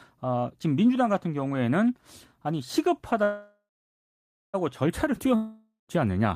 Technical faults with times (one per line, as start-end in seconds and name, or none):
3.23-4.56 call audio freeze
5.35-5.91 long network dropout